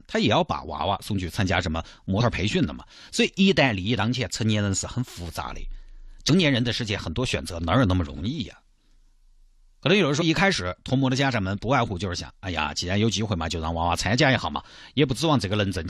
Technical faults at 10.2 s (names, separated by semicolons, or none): compressed frames skipped